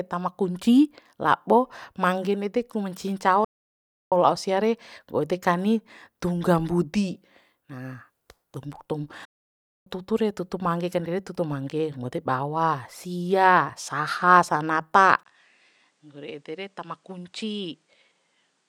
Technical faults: playback stall; input switched to a poorer device

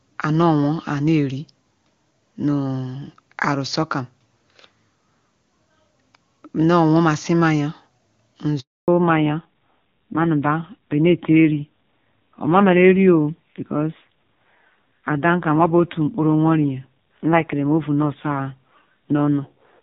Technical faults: handover gap; fallback to narrowband

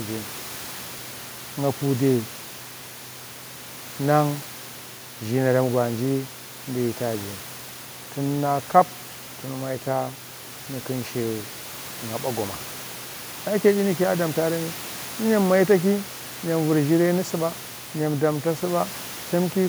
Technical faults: none

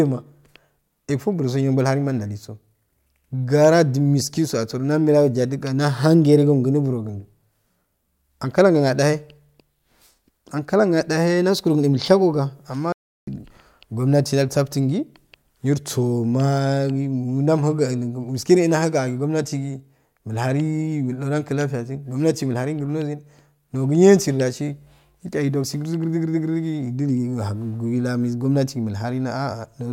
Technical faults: audio dropout to silence

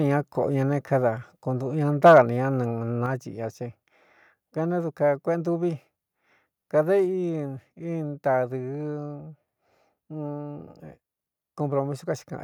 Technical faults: microphone overload; microphone volume stepped down

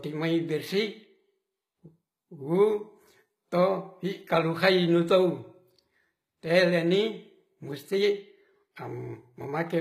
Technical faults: HE-AAC compression

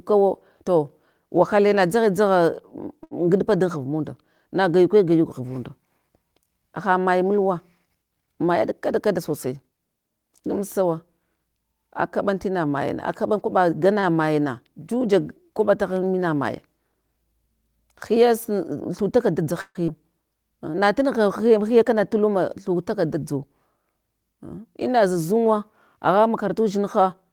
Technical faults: short stall from a late packet; jitter buffer speed-up; call audio freeze; skip ahead

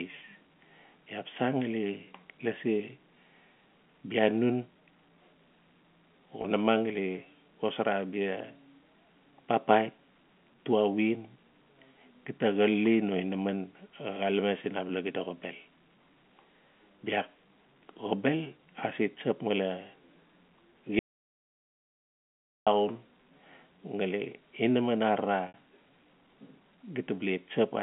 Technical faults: packet loss with pitch repetition; audio dropout to silence

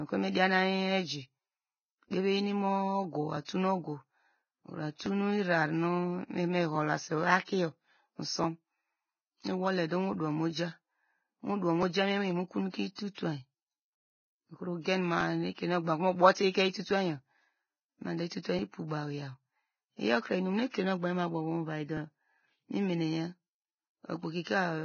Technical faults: Vorbis compression; clock drift buffer slips; pre-echo

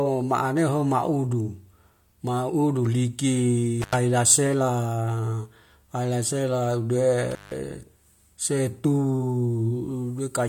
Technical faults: intermittent contact

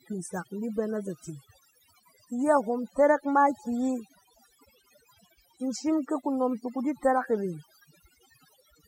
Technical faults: overdone noise removal

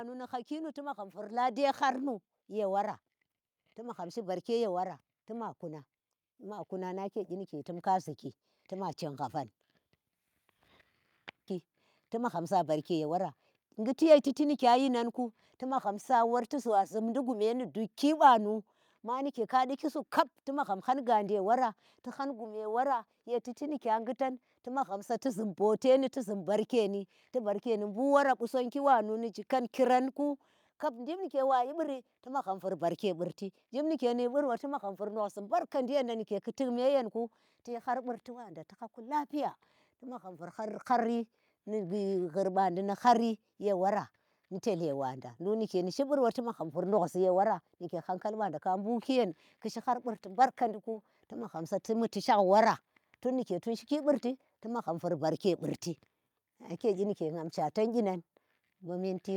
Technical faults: automatic gain rising

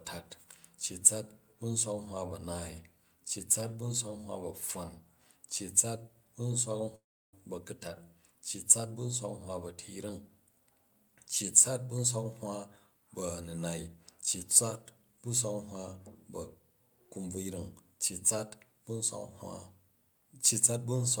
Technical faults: long network dropout

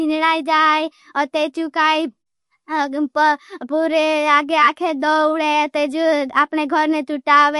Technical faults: MP3 compression

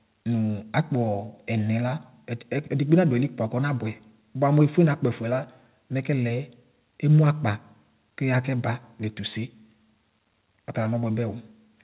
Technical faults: none

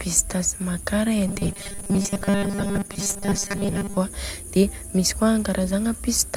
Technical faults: robotic sound from repeated short buffers

